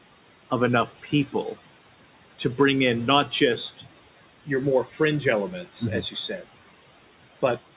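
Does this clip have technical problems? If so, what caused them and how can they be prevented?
Yes. Noise suppressor artifacts run throughout: the suppressor pulls steady background down by about 18 dB, leaving residue that sinks between words and rises under them. Prevent this by lowering the suppression strength or reducing room noise at the source.

Speech cut by the noise suppressor occurs at 0.86–1.35 s, 3.77–3.88 s (after "to bring in not", before "your more"), 4.84–5.0 s (after "your more"), and 6.02–6.46 s. Soft speech was mistaken for noise and dropped by about 11–14 dB, visible as sudden dips in the waveform envelope and faded spectrogram energy. Prevent this with gentler suppression or a speech-aware suppressor that protects quiet consonants.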